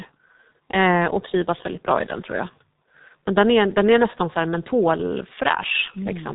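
Speech that sounds muffled and hoarse from start to finish, with smeared consonants and nothing above about 3.8 kHz. These are the marks of heavy G.723.1 codec damage. Its coarse 30 ms frames and slowly updated voice model blur rapid detail, which fits a bitrate around 6 kbit/s.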